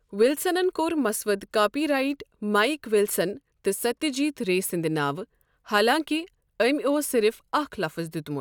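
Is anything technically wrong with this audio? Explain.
No, nothing stood out as technically wrong on listening to this speech clip.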